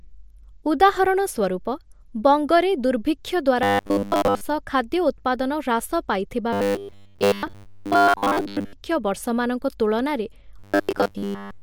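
Robotic sound from repeated short buffers appears three times: 3.63 to 4.41 s, after "ବଙ୍ଗରେ ଦୁର୍ଭିକ୍ଷ" and before "ଖାଦ୍ୟ ଉତ୍ପାଦନ"; 6.53 to 8.73 s, ending before "ବର୍ଷମାନଙ୍କ ତୁଳନାରେ"; and 10.59 s to the end of the clip, after "ବର୍ଷମାନଙ୍କ ତୁଳନାରେ". The speech becomes a rigid metallic buzz locked at 100 Hz, likely from a 10 ms fragment being replayed to cover most of the time while fresh audio was missing. Unlike codec warble, the buzz stays at one fixed pitch rather than following the speaker's voice.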